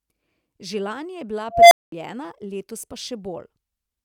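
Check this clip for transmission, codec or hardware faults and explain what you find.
One fault is present in this speech: an unstable filter from 1.51 to 1.92 s. A recursive filter has diverged, so a tone around 700 Hz swells over about 205 ms into a loud clipped squeal, then overflows and drops to silence for about 212 ms before resetting.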